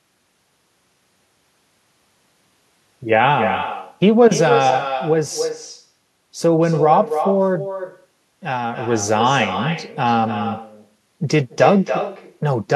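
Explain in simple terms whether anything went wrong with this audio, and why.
The far end of this call played the speech through a loudspeaker, its microphone picked it up again, and nothing removed it: echo with no canceller. Throughout the speech, every phrase returns about a third of a second later as a quieter, thinner copy.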